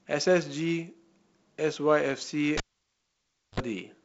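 From 2.57 to 3.6 s, a cable is pulled and plugged in. Pops bracket the near silence, with 51 ms of 50 Hz mains buzz that a plain dropout lacks.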